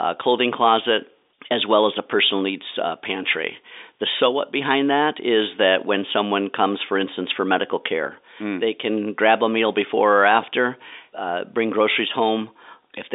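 No technical faults can be heard in the speech. It carries the narrow sound of G.711 telephone coding, with the line band running from about 300 Hz to 3.7 kHz and nothing above about 3.8 kHz.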